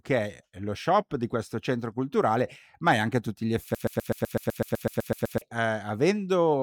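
A speech recording that, right after "tutti gli" at 3.75 s, catches on a fragment about 126 ms long and stutters it back to back 13 times until 5.41 s, a broken-record loop; the likely cause is a stalled player or stream re-sending its last buffered piece, so the intervening speech is lost.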